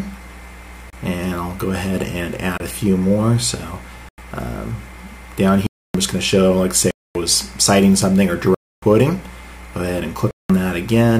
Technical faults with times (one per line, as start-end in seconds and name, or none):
0.90-0.93 block of digital silence
2.58-2.60 block of digital silence
4.09-4.18 block of digital silence
5.67-5.94 block of digital silence
6.91-7.15 block of digital silence
8.54-8.82 block of digital silence
10.31-10.50 block of digital silence